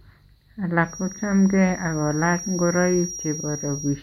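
From 0.81 s to the end of the speech, a feedback whistle sits behind the voice: a thin, steady tone at 5.7 kHz, roughly 15 dB below the speech and swelling and fading slowly in level. The likely cause is a loudspeaker-to-microphone loop running just short of instability, with enough gain at that one frequency to keep it ringing continuously but not enough to make it build up and run away.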